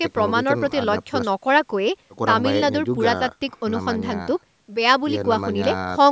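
No technical faults can be heard in the speech: it carries the usual signature of call microphone processing, with the lowest bass trimmed away and nothing above 8 kHz, as that path normally produces.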